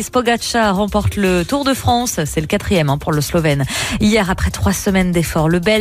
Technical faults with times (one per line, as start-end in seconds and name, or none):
none